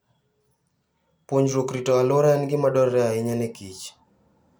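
A short speech recording with no technical faults to report. Nothing in it needs a time or a cause attached.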